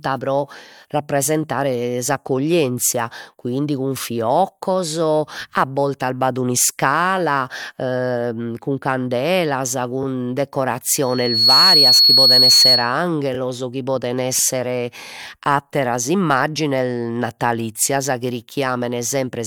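Speech, with two kinds of fault. Repeated frames occur at 10.02 to 10.05 s, 13.34 to 13.36 s and 15.22 to 15.24 s. Each time, one 26.1 ms block plays twice, giving a brief stutter. The block length fits MP3 frames at 44.1 kHz. A loudspeaker feedback squeal runs from 11.01 to 12.97 s. It is a single 4.4 kHz tone that swells over about half a second to roughly 10 dB above the speech. A microphone is picking up its own loudspeaker, and the loop's gain exceeds one at that frequency.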